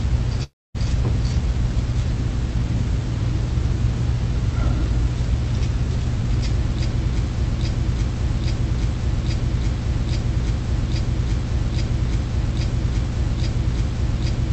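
At 0.43 s the audio breaks off in what is likely a long network dropout, lasting until 0.76 s. For the first part of that gap the receiver keeps extending the last sound it had as a fading buzz. That concealment decays into roughly a quarter second of near silence before the stream resumes. About 0.32 s of the original audio never arrives, so playback picks up later in the material with that stretch missing.

From 7.38 s to the end of the clip there is a broken-record loop, likely from a stalled player, encoder or stream that kept resending the last fragment it held. A piece about 0.83 s long repeats exactly, back to back, with a regular rhythmic stutter at that period. Everything that should have played after 7.38 s is lost. The repeated fragment carries the same Opus coding character as the rest of the clip, band-limited to about 8 kHz.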